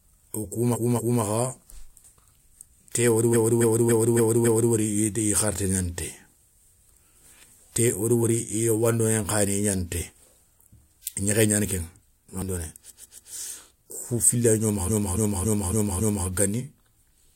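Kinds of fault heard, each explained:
Repeated frames: The same block of compressed speech is decoded again, making a stutter; blocks of 139 to 279 ms replay two to five extra times, adding about 3.7 s in all. Spectrograms show identical patterns tiled side by side.
Dropped buffer (overrun): A piece of audio is lost and the edges are butted together, heard as a small jump ahead at 5.58 s and 12.42 s, roughly 20 and 40 ms gone, likely a buffer overrun. Waveforms show a step discontinuity, spectrograms a thin vertical line.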